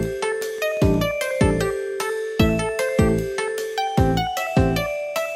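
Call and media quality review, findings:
Train of clicks, 0.05–0.95 s: regular ticking at 5.6 clicks per second, around seven in all, each about as loud as the surrounding sound. Likely nearby equipment interference or a faulty connection or power supply, injecting similar pulses into the path.

Worth noting for triage: the spacing is very even, so this looks like a periodic source rather than random hits. The clicks peak level with the sound itself, and they stop before the first second is out.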